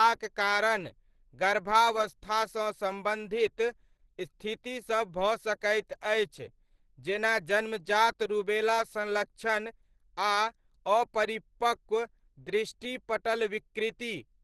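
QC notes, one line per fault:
Throughout: Opus compression. Hoarse, muffled speech with nothing above 12.2 kHz, which fits a low bitrate near 16 kbps in its hybrid speech mode, likely.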